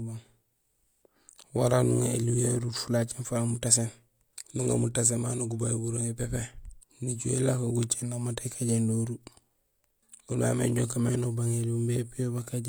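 The speech recording has no audible technical fault anywhere along its length.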